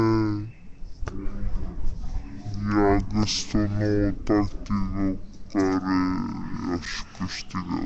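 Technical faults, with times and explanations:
Throughout: wrong sample rate. Everything runs at half speed and sits a full octave, 12 semitones, lower, with speed and pitch falling together. That fits material recorded at 44.1 kHz being played at roughly 22 kHz with no conversion.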